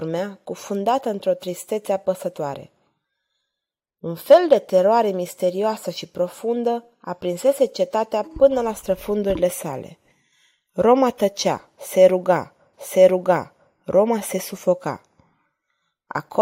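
Right after "tăcea se ruga", at about 12.73 s, there's a stream segment repeated: the player queued the same chunk twice, so roughly a second of the speech, 1.0 s exactly, plays again through 13.73 s, with a small blip where it jumps back.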